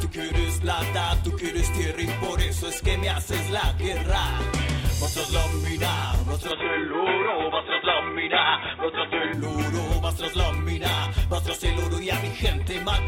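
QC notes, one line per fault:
6.51–9.33 s, input switched to a poorer device, likely: the sound abruptly goes dull and boxy with nothing above 3.8 kHz, a faint new background hiss comes in, and level barely moves, with no gap at either switch before it clears again.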